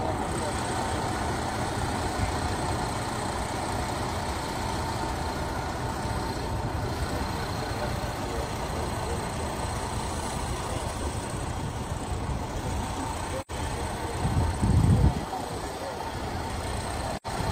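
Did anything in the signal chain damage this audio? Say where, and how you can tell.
Yes, at the codec stage. The sound drops out from 13.41 to 13.51 s and again from 17.16 to 17.27 s. Each gap lasts about 85 ms and fades out and back in instead of cutting off. This is AAC frame loss with muting. The decoder zeroed the spectrum of the missing frames, and the overlap-add of neighbouring windows tapers the edges of the gap. The gap length points to two lost frames each time.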